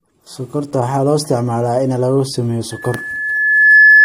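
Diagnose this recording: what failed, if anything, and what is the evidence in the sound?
Loudspeaker feedback squeal in the acoustic path between speaker and microphone. From 2.71 s to the end of the clip, a steady 1.7 kHz tone swells over about a second to roughly 10 dB above the speech. Loop gain exceeded unity at that frequency, so it kept building.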